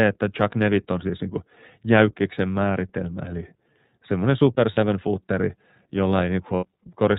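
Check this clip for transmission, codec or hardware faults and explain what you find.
Two faults are present in this speech: iLBC codec coding throughout, and two short dropouts from lost iLBC frames.

iLBC codec, throughout the clip. The speech passes through a narrowband codec that codes each frame's excitation independently, with no help from the previous frame. The damage is plainly audible. Everything above 4 kHz is gone, so the speech sounds muffled and band-limited, with a rough, slightly synthetic grain. The frame timing points to 30 ms frames, which fits the 13.33 kbps mode.

Lost iLBC frames, at 4.74 to 4.78 s, just after "määritelmä eli semmoinen super", and at 6.56 to 6.65 s. The first gap is about 30 ms, which points to one missing frame. The second is about 60 ms, which points to two. The decoder fills each hole by repeating the last pitch cycle mixed with noise, so you hear a brief held, buzzy vowel-like sound where the speech should continue. 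Because each frame decodes on its own, normal speech returns immediately after each gap.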